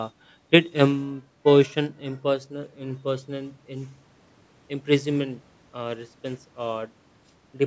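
No technical faults can be heard anywhere in the speech. The call microphone processing it passed through is audible only as a trim of the lowest bass and a top end that stops at 8 kHz, both normal for that path.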